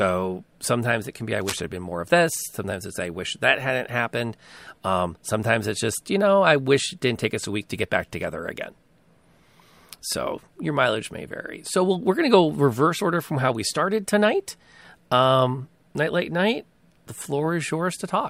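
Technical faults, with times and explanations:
1.41–1.60 s, cable scratch noise: for about 0.19 s a dense, irregular burst of scratching and rustling sits over the speech, roughly 10 dB below it. The likely cause is a worn cable, connector or control being moved, so its contact resistance fluctuates rapidly and modulates the signal path. That uneven, fast-changing contact produces the clustered crackle rather than a steady hiss or a single click.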